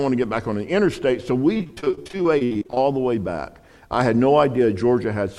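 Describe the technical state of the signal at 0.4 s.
Nothing is wrong with the signal at 0.4 s; the audio is intact at that point.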